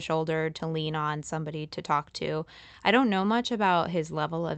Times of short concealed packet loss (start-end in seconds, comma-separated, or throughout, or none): 3.21-3.23